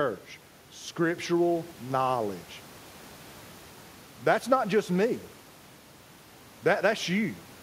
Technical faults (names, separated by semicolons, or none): none